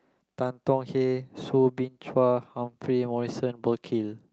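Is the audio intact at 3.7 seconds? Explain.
Yes, the audio is intact at 3.7 seconds, with no fault at that moment.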